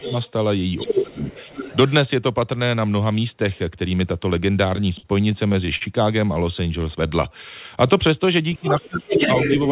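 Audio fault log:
0.00–0.13 s, 0.85–1.31 s and 8.58–9.23 s: speech suppressed in double talk. The main voice sinks while a second voice is heard. The deepest dips are about 20 dB in the first and last spans, and about 10 dB in the middle one. The affected stretches add up to about a second. The likely cause is an echo canceller that could not tell the near talker from the loudspeaker echo, so it turned both down.
0.05–0.31 s, 0.77–1.90 s and 8.67–9.71 s: other side's voice leaking through. A second voice sits under the main one and overlaps each suppression span. It starts about 15 dB below the talker. By 0.77 s it is only about 5 dB below. From 8.67 s to the end it is about as loud as the talker. This is likely loudspeaker sound reaching the microphone that echo cancellation did not fully remove.
4.76–5.84 s: repeated stalls (stutter). The audio catches seven times in about a second. Each catch holds the last sound briefly, and the longest lasts about 52 ms. 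Together they fill 166 ms, roughly 15% of the span, and nothing is lost. The jitter buffer kept running dry as packets came late. Each wait was bridged by stretching the previous sound, so the audio drags and hiccups instead of dropping out.
6.64–7.33 s: jitter buffer slow-down. The audio plays at about 91% speed with the pitch unchanged, adding 70 ms. Sounds draw out slightly, and a faint waver can creep in. The receiver repeated single pitch periods and fragments of pauses to rebuild its buffer reserve. Playback in this span runs slower, and the voice stays at the same pitch.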